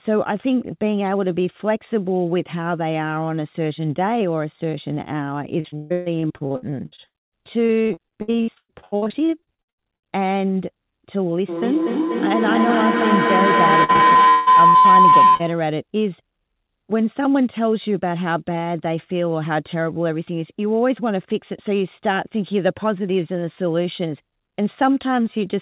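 From 5.6 to 10.04 s the speech turns choppy and robotic: repeated packet loss, with about 49 short holes patched by stretching the last sound. The longest gap is 143 ms. From 11.49 to 15.74 s a feedback howl builds near 1 kHz, pulsing roughly every 200 ms. It peaks about 8 dB above the speech. The microphone-to-loudspeaker loop keeps gaining level. Inside it, from 13.84 to 15.41 s, more repeated packet loss chops the sound, with holes up to 178 ms.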